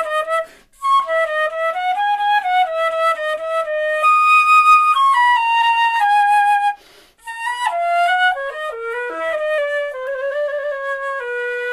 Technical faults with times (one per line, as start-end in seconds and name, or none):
9.58-10.32 drift correction step